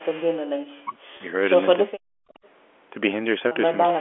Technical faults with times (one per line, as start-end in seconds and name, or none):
0.64-1.32 speech suppressed in double talk
1.17-1.20 packet loss with pitch repetition
1.83-2.27 speech suppressed in double talk
2.34-2.48 echo leak
3.48-3.51 packet loss with pitch repetition
3.94-4.00 speech suppressed in double talk